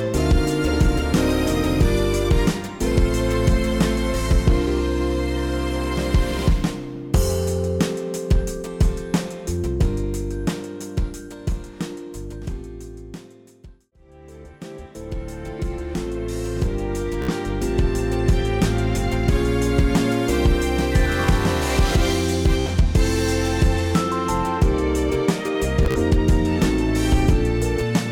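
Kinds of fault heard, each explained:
Bluetooth stutter: at 17.22 to 17.30 s, 22.60 to 22.68 s and 25.83 to 25.99 s, the wireless link failed to deliver audio in time, so the receiver looped its last short buffer, giving a brief machine-gun buzz. The first two gaps cover about 61 ms each, consistent with four lost packets. The third is scattered over about 122 ms, its longest repeat run 45.7 ms, totalling 76.2 ms. The sound then jumps ahead as if it had played on.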